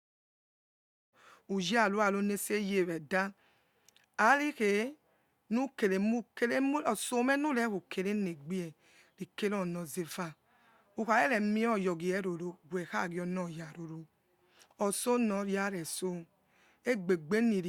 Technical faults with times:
none

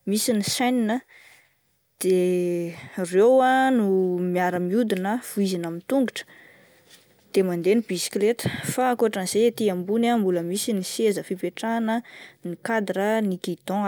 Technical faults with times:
none

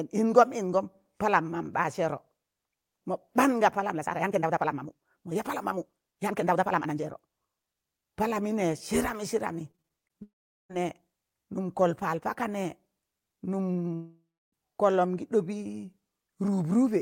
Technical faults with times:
3.88-7.28 time-stretched section
9.71-10.16 repeated packet loss (robotic sound)
10.22-10.71 long network dropout
13.95-14.54 long network dropout

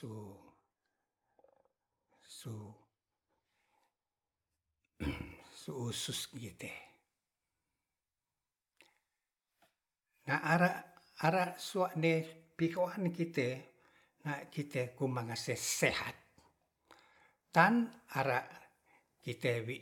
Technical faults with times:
none

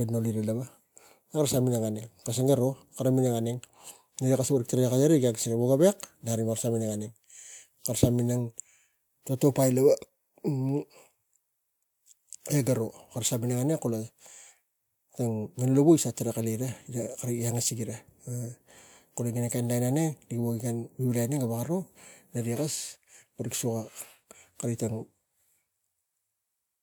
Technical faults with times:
none

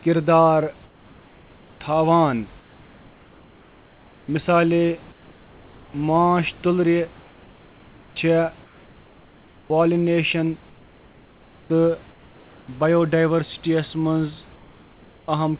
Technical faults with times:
0.86-1.80 comfort noise in place of the background
2.60-4.28 comfort noise in place of the background
5.12-5.94 comfort noise in place of the background
7.20-8.16 comfort noise in place of the background
8.64-9.70 comfort noise in place of the background
10.70-11.70 comfort noise in place of the background
12.12-12.68 comfort noise in place of the background
14.56-15.28 comfort noise in place of the background

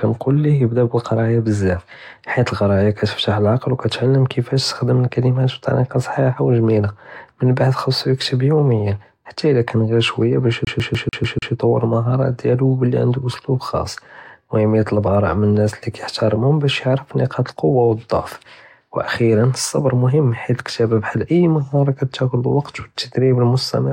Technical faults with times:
10.65-11.53 CD stuck on one turn

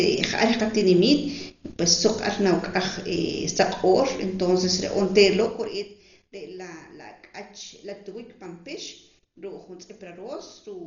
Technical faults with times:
0.00-10.87 Dolby Digital compression

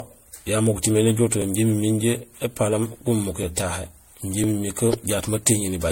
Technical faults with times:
0.00-5.92 generation loss
0.41 overlapping chunks
1.42 overlapping chunks
2.43 overlapping chunks
3.43 overlapping chunks
4.44 overlapping chunks
5.45 overlapping chunks

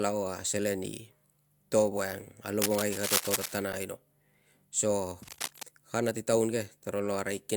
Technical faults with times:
2.62-3.57 cable scratch noise
3.72 gap between stream segments
5.23-5.63 cable scratch noise

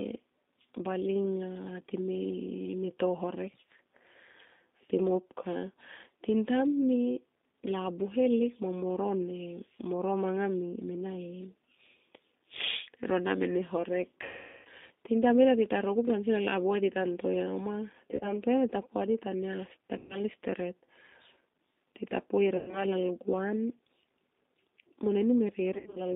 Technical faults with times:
0.00-26.16 G.729 codec
14.23-14.67 VoIP packet loss concealed by the speech codec
18.11-18.33 VoIP packet loss concealed by the speech codec
19.98-20.19 VoIP packet loss concealed by the speech codec
22.57-22.86 VoIP packet loss concealed by the speech codec
25.74-26.00 VoIP packet loss concealed by the speech codec

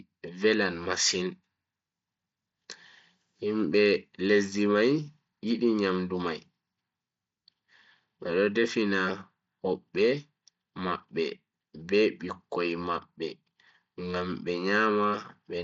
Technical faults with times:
none

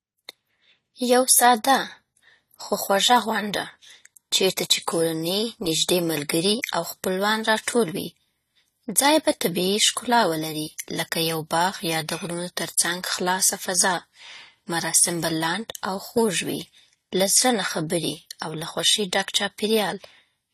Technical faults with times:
0.00-20.54 AAC compression

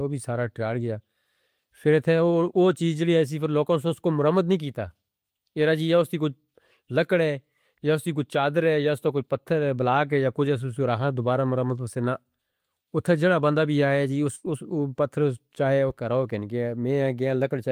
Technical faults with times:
14.35-14.47 burst of packet loss

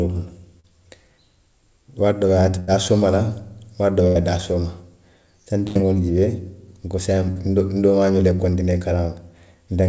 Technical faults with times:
0.60-0.67 short concealed packet loss
2.60-2.70 burst of packet loss
4.07-4.18 burst of packet loss
5.67-5.78 burst of packet loss
7.31-7.38 short concealed packet loss

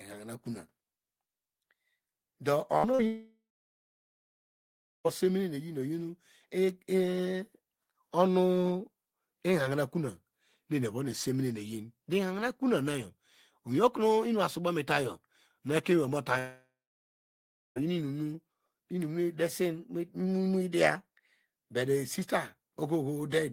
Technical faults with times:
2.77-2.85 burst of packet loss
2.91-3.01 short concealed packet loss
3.07-5.07 long network dropout
16.39-17.78 long network dropout

